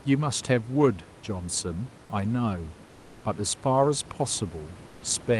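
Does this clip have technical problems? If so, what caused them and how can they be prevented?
Yes. Comfort noise in place of the background appears from 2.89 to 3.19 s and again from 4.87 to 4.99 s. In these gaps the room's background, already about 25 dB below the loudest parts, turns into a smooth, featureless hiss that is about 2 dB and about 3 dB quieter. The likely cause is Opus discontinuous transmission: the sender pauses when it detects no speech, and the receiver fills the silence with synthetic noise until sound resumes. To prevent it, disable DTX on the Opus encoder so the real background keeps flowing.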